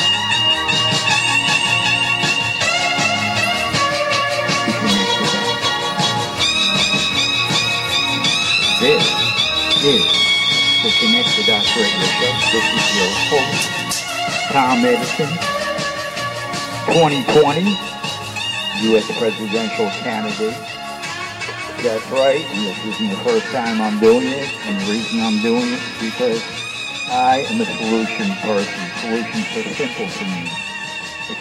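At about 4.91 to 4.99 s there's a short burst of loose connector crackle, a ragged scratchy spatter lasting roughly 70 ms. That's a worn or dirty contact flickering between touching and not, chopping the signal.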